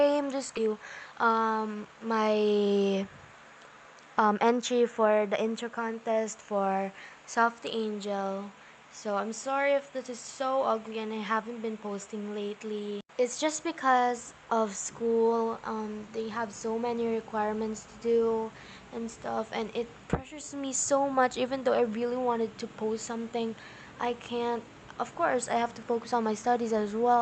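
The audio has come through a WebRTC call path with Opus coding, and its high end stops near 8 kHz. At 0.57 s there is a skip ahead. Playback jumps forward with no filler, and roughly 0.7 s of sound is simply missing. The two sides of the cut are butted together almost directly. This points to a stretch of audio dropped while later audio was already queued. Right after, from 0.67 to 2.67 s, comes a jitter buffer speed-up. The sound runs at about 113% speed, yet its pitch stays the same. It sounds hurried. The receiver is trimming many tiny pitch-period slices, about 0.3 s in total, to drain excess buffered delay.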